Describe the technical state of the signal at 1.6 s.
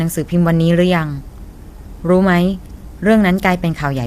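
At 1.6 s the speech is rough and grainy, with noise filling the gaps between harmonics, as it is across the whole clip. This likely comes from low-delay AAC compression (AAC-ELD), whose short frames resolve pitch harmonics poorly, at what sounds like roughly 32 kbps.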